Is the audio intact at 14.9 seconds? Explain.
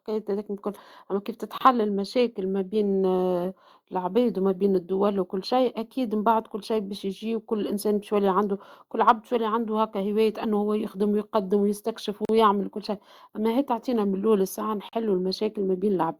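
No. At 14.89 s the speech drops out into a short silence of about 42 ms, ending at 14.93 s, its edges smeared by the codec, and then picks up exactly where it broke off. This is a gap at a join of encoded pieces: the audio was encoded in separate sections and spliced back together untrimmed, so the encoder's start-up delay and the padding on the final frame of the earlier section remain as dead air.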